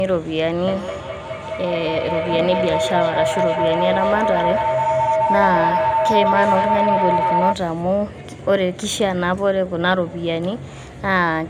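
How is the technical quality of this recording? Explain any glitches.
Poor, because of a feedback howl. From 0.67 to 7.6 s, a loudspeaker-to-microphone loop regenerates around 1 kHz, pulsing about every fifth of a second and peaking about 1 dB above the speech. It shows as a bright horizontal spectrogram line and a swelling, throbbing waveform envelope.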